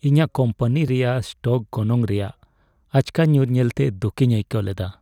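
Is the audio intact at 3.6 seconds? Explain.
Yes, the audio is intact at 3.6 seconds, with the speech continuing cleanly through that moment and no dropout, click or distortion to be heard.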